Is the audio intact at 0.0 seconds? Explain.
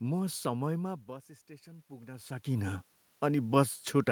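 Yes, the audio is intact at 0.0 seconds, with only the ordinary background noise of the room present there.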